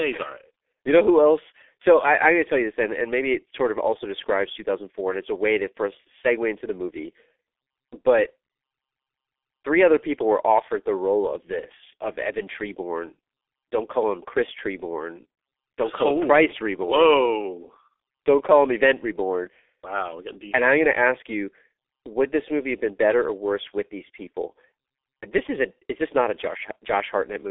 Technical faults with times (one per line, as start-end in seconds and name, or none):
0.00-27.51 G.723.1 codec